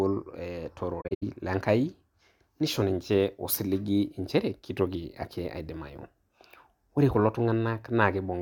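AAC frame loss with muting hits 1.01 to 1.23 s. Lost frames were zeroed, leaving soft-faded gaps, the longest about a tenth of a second.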